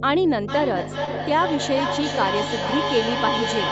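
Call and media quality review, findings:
Mains hum, whole clip: steady 50 Hz tone with low harmonics, loud, only a few dB under the speech. Ground loop or nearby transformer coupling the power line in. Constant pitch and level, unlike echo, which tracks the talking.

Feedback echo between two devices, 0.48 s to end: speech returns roughly every 0.4 s, thinner and ringier each pass, loudest about 4 dB below direct speech. A second device in the same room replays the call into this mic. Fixed spacing and multiple repeats distinguish it from room reverb.

Short concealed packet loss, 1.05 to 1.09 s: brief smear where about 20 ms never arrived and was filled by extending the preceding sound, then blended back. Jitter buffer or network. A single isolated event with no repeat, so not echo. The coding noise and the cut above 8 kHz belong to the Opus call path.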